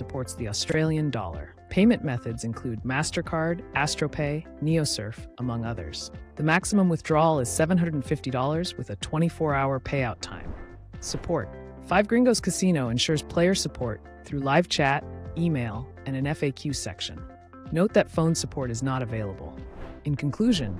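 Chunks out of order occur twice, at 0.70 to 0.74 s and again at 12.54 to 12.59 s. In each case a block of roughly 23 ms arrived one chunk late and was played after its successor. No audio is missing, but the two blocks swap places, leaving three abrupt joins within about 46 ms. The result is a brief jumbled stutter.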